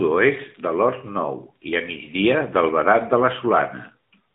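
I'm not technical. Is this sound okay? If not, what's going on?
No. From start to finish, the speech has been squeezed through the AMR narrowband mobile codec, the system older mobile phone calls use. It discards everything above 4 kHz and rebuilds the speech from a simple model of the throat and mouth, so the speech sounds boxed-in, buzzy and artificial. Simply cutting the high frequencies would only make it dull. The buzzy, synthetic edge is what points to this phone-call codec.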